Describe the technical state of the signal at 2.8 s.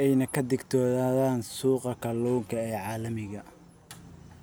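At 2.8 s the speech signal is intact, with no dropout, distortion or other fault at that point.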